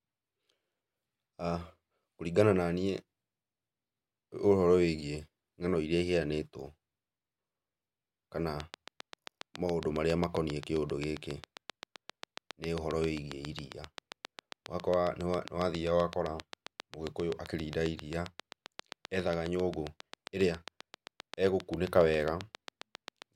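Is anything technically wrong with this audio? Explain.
Yes. From 8.60 to 23.23 s, a train of clicks ticks at a steady 7.5 per second. The pops are nearly identical and loud even in pauses, unlike random crackle, and likely come from nearby equipment interference.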